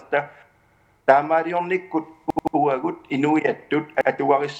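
Repeated buffer stutters occur at 0.60–0.94 s, 2.30–2.56 s and 4.01–4.10 s. Each time, an 85 ms chunk replays with hard joins, which fits a 4096-sample buffer.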